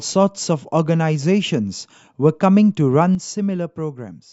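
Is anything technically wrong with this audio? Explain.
Yes. At 3.15 s the speech and its background noise drop together by about 8 dB in a single step and stay lower to the end. This sudden gain jump is likely a digital gain change applied between adjacent samples with no ramp to smooth it.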